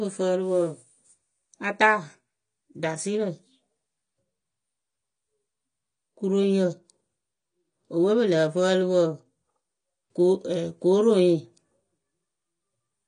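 From start to finish the speech is dull above a hard 9.6 kHz ceiling, with sibilants turned fizzy and warbling. That mix points to AAC compression, likely AAC-LC at a bitrate near 32 kbps. A plain low-pass filter would cut cleanly without the swirling texture.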